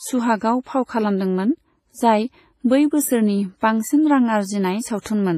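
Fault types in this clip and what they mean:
WMA compression: The speech has heavy codec damage throughout. It sounds washy and ringing, with a hiss that swells and fades along with the speech, and nothing comes through above 15.3 kHz. The likely cause is WMA compression at a low bitrate, which fits something near 24 kbps on the first version of the codec. Its long transform blocks smear quantisation noise across tens of milliseconds, and low-level spectral detail is discarded.
pre-echo: From 3.6 to 3.62 s, a short hiss runs just ahead of a sharp attack, spreading about 23 ms before it and making the onset sound soft and smeared. It happens because a transform codec shares its quantisation noise evenly across a block. When the attack lands late in that block, noise sized for the loud part also fills the quiet stretch just before it, where nothing masks it.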